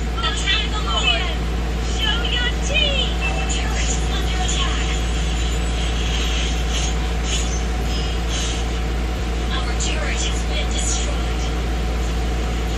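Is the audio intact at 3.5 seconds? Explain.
Yes, at 3.5 seconds the audio plays through cleanly, with no dropout, click, distortion or other fault to be heard at that moment.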